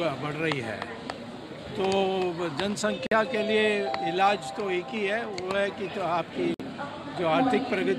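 At 3.07 s the sound drops out for about 47 ms, and again at 6.54 s for about 54 ms, each a gap at a join of encoded pieces. Separately encoded segments were butted together with their encoder delay and final-frame padding left in, opening brief silences with smeared edges before the sound resumes exactly where it stopped.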